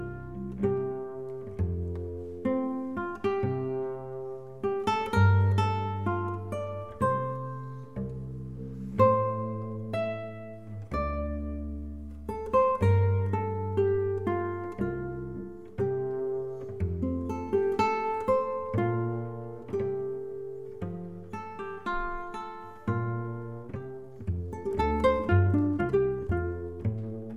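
At 23.60 s the pace jumps abruptly and stays fast to the end. This is a time-stretched section. The audio runs about 1.93 times faster than before, yet the pitch does not rise. The likely cause is software squeezing this part to fit a shorter length. To hold the pitch steady, it drops short pieces of the waveform. The result sounds rushed.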